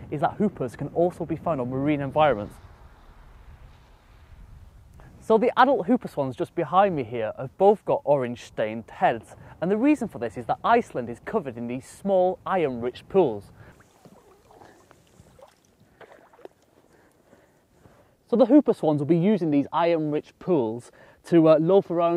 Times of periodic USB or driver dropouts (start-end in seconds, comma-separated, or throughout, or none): none